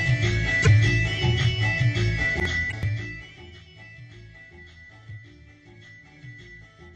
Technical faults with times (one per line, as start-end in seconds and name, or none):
0.62-0.67 damaged data in a compressed stream
2.68-2.73 damaged data in a compressed stream